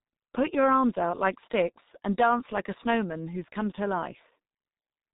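Throughout the speech, heavy G.723.1 codec damage is audible. Nothing above 3.8 kHz survives, so the sound is muffled. The coarse 30 ms frames and slowly updated voice model leave it hoarse, with smeared consonants, which fits a bitrate near 6 kbit/s.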